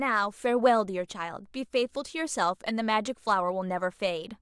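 No technical faults can be heard anywhere in the speech recording. There is nothing in it to mark with a time or trace to a cause.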